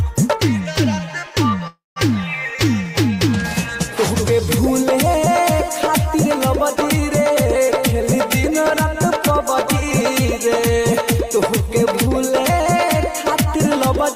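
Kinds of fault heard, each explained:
Call audio freeze: at 1.67 s a fading buzz then silence fills 0.29 s before the sound resumes intact, likely from delayed packets draining the jitter buffer.
Jitter buffer speed-up: from 8.16 s to 14.15 s, four stretches run 3 to 6% faster at unchanged pitch as the receiver trims short pitch-period pieces to shed excess buffered delay.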